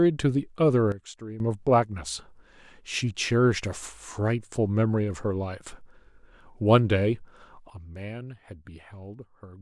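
A sudden gain jump occurs from 0.92 to 1.4 s and again from 7.7 s to the end of the clip. At each onset the level of the speech and the background noise together drops by about 12 dB from one sample to the next; the first then snaps back at 1.4 s. The likely cause is a digital gain setting or bit shift applied instantly rather than ramped, so there is no fade, only an abrupt step down.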